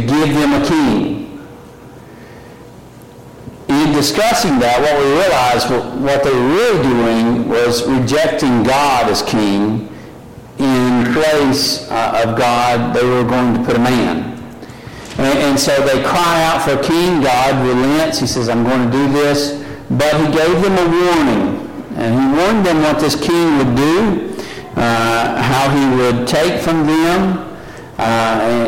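No technical faults can be heard anywhere in the audio.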